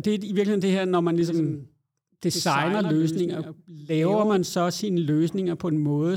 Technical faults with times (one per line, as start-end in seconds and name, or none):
1.21-4.37 doubled audio track